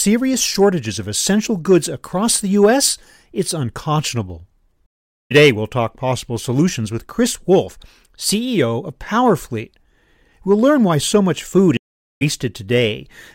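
Two stream reconnects occur: at 4.86 to 5.32 s, after "it's unconscionable", and at 11.77 to 12.23 s, after "why so much food". Each time the connection dropped and the player restarted mid-stream, leaving about 0.44 s of silence before the speech resumes roughly half a second further on.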